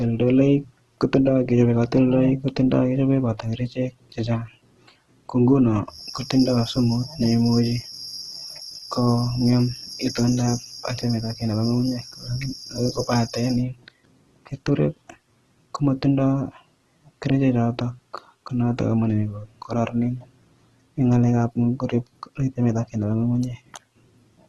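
Throughout the speech, nothing reaches above 12.4 kHz. The tone is heavily damaged: rough, grainy and noisy rather than swirly. This is likely Opus compression in its music mode, filling starved bands with folded or noise content. The damage fits a low bitrate near 12 kbps.

From 5.85 s to 13.65 s, a feedback whistle sits behind the speech. It is a thin, steady tone at 5.6 kHz, about 15 dB below the speech. The likely cause is a loudspeaker-to-microphone loop ringing just short of full feedback.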